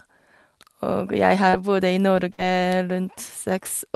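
At 1.49 to 1.55 s there is a brief smear in the speech, a wobble where the sound seems to stretch and then slide back into place. This is short concealed packet loss. About 40 ms of the call arrived too late for the decoder, and the receiver covered the hole by extending the sound that came just before it for about 33 ms, then crossfading back into the real signal.

From 2.33 to 2.40 s the speech briefly freezes into a held sound that fades, and then picks up a little further along with a small piece gone. This is a burst of packet loss. About 60 ms of consecutive audio was lost or arrived too late to play. The receiver filled about 53 ms by repeating the last sound and letting it fade before the real audio returned. The call path's top end stops near 12 kHz, which fits Opus at around 32 kbps.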